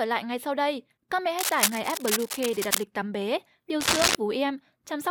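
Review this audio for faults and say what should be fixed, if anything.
Cable scratch noise appears twice in the speech. From 1.39 to 2.83 s, just before "tắm bé điều", dense, uneven bursts of scratching sit over the sound at roughly the same level as the speech. A shorter burst from 3.80 to 4.15 s, right after "tắm bé điều", is somewhat louder than the speech. The likely cause is a worn cable or connector being moved, so its contact resistance jumps around rapidly. To prevent it, replace or reseat the worn cable and strain-relieve it so it stays still while recording.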